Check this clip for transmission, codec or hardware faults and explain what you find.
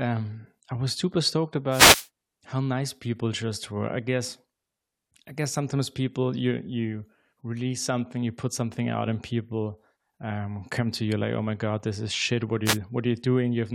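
Two wireless microphone noise hits occur, from 1.67 to 2.08 s and from 12.64 to 12.78 s. In each, the radio link from the analogue FM microphone fades as reflected signals cancel the direct one, and receiver noise rises into the audio, heard as a short swish of static over the speech. On a spectrogram each hit is a broadband band of hiss spanning the frequency axis; on the waveform, a brief noisy thickening of the trace lasting about 0.4 s and 0.14 s.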